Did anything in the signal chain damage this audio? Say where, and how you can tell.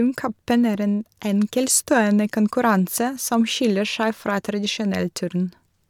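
No, nothing in the signal chain has audibly damaged this speech recording. None of the stages from capture through to playback leaves a mark that a listener can pick out.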